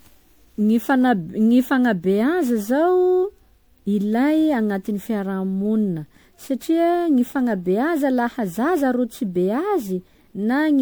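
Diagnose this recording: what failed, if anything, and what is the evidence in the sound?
The fault sits at the codec stage: generation loss. Throughout the speech the sound has a swirly, smeared and hollow quality, with consonant attacks blurred. The damage is heavier than a single lossy pass would leave, although content still reaches about 20.9 kHz, which fits an MP3 at around 128 kbit/s. The likely cause is repeated decoding and re-encoding, roughly ten times. Each pass quantises on a shifted frame grid, so the noise and spectral holes add up.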